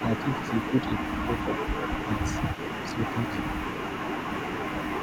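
From the start to 0.88 s the speech is suppressed in double talk. Its level dips in patches, by roughly 10 dB at worst, over about half a second. The likely cause is an echo canceller on the loudspeaker side that could not tell its own talker from the loudspeaker sound while both sides spoke, so it turned everything down.

At the very start, from 0.0 to 0.04 s, a faint echo leak appears. A copy of the speech returns 278 ms late, about 25 dB below it. The same echo returns from 0.61 to 1.39 s, now about 20 dB down. This is likely loudspeaker sound that got past the echo canceller and was sent back.

From 1.11 to 2.4 s the double-talk suppression hits harder. The level falls by around 15 dB, over roughly a second in total.

The echo leak returns from 1.56 to 2.04 s. It comes back at 2.21 s and runs to the end. It keeps the 278 ms delay and sits about 20 dB under the speech.

From 2.94 to 3.55 s the speech dips again, by about 10 dB, across roughly 0.4 s.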